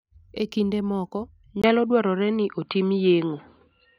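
Input switched to a poorer device at 1.62 s, likely a change to another microphone or headset. After a brief 20 ms gap, the speech loses everything above 4.7 kHz and turns dull and boxy to the end, with a level shift of about 5 dB and a faint new noise floor.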